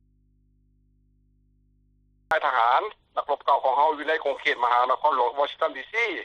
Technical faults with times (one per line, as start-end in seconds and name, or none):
0.00-2.31 audio dropout to a faint residue